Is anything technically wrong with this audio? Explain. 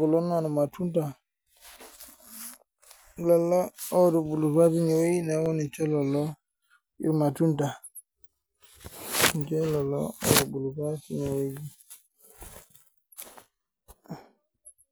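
Yes. At 5.46 s, just before "ninche lelo", and again at 14.17 s, a fraction of a millisecond of the stream was likely lost as dropped samples, so the waveform jumps abruptly and each spot gives a single sharp click.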